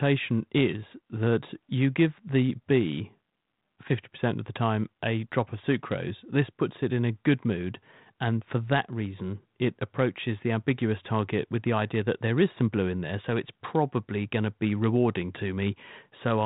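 No technical faults can be heard in this speech.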